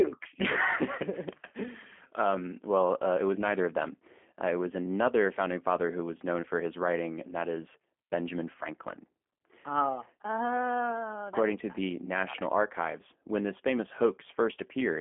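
Throughout, G.729 codec coding caps the speech near 3.5 kHz and rebuilds it from pulses and pitch prediction, giving a rough, synthetic edge unlike plain band-limiting's clean dullness.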